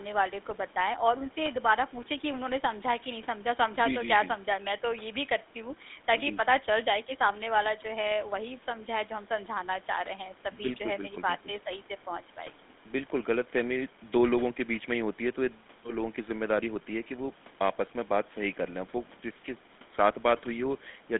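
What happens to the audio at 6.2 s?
At 6.2 s the speech carries GSM full-rate codec damage, present across the whole clip. The coder models the vocal tract and excites it with sparse, regularly spaced pulses, which fits a 13 kbps full-rate coder. This gives a plainly audible buzzy, gravelly roughness, with the band confined to about 200 Hz to 3.6 kHz.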